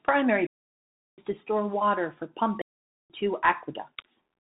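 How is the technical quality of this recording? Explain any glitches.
The recording is poor: the speech is narrowband and coarse all the way through, and it cuts out completely twice.

The Bluetooth CVSD headset codec shapes the whole clip. Nothing above about 3.8 kHz survives, so the speech sounds boxed and muffled. The s sounds are scratchy, and a grainy hiss sits under everything. The audio fits CVSD's 64 kbps stream, which sends one bit per sample saying only whether the waveform should step up or down, with an adaptive step size. Fast, loud high-frequency movement outruns that step, and the coding turns rough.

There are two digital wireless dropouts. The first runs from 0.47 to 1.18 s, about 0.71 s, ending just before "to store water for". The second runs from 2.62 to 3.10 s, about 0.48 s, right after "to store water for". Each is a clean hole of near silence with a very quick fade and no crackle or noise burst on either side. 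This happens when the wireless link loses too much data and the receiver mutes rather than play corrupted audio.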